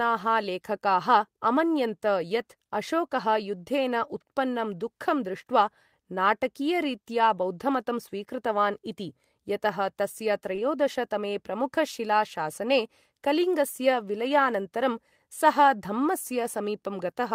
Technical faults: short concealed packet loss; lost packet rebuilt from error correction

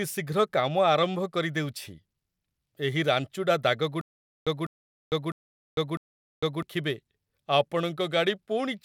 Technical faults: stutter with silent gaps

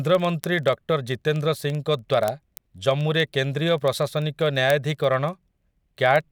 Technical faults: word clock ticks

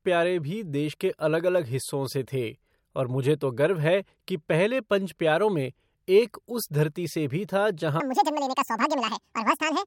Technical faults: section at the wrong speed

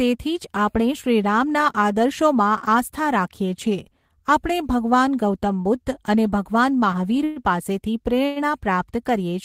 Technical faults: repeated stalls (stutter); short stall from a late packet

